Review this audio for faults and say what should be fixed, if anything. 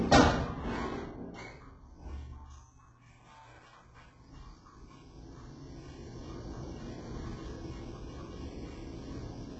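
Throughout, the highs sound gritty and metallic, with nothing above 8 kHz. Likely HE-AAC compression at a very low rate, near 8 kbps, rebuilding treble from copied lower bands. Encode at a higher bitrate to prevent this.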